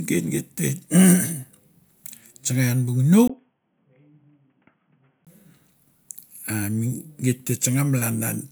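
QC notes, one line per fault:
3.28–5.27 s, input switched to a poorer device: after a 20 ms gap, speech turns quieter and boxy, with nothing above 3.4 kHz and faint new hiss, likely from a narrowband headset.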